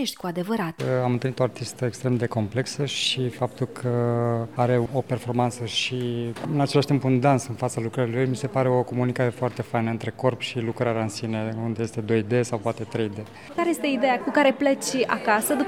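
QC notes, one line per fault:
10.81–12.96 s, channel delay (comb filtering): one channel slips about a single sample behind the other, and the mono sum cancels where they meet out of phase. The first notch sits up near 20 kHz, so the top end dulls rather than sounding hollow.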